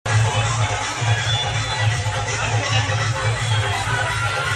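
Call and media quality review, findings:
No faults found: no dropouts, level jumps or timing disturbances anywhere in the signal.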